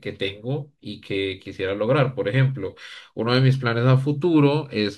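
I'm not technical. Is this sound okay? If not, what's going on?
No. From 2.39 to 3.61 s the speech gets a low, rough buzz, pulsing about 47 times a second. This is a block size mismatch (truncated): one stage hands over chunks of sound, which fits 1024-sample blocks, and the next stage drops the end of each, leaving a jump at every chunk edge.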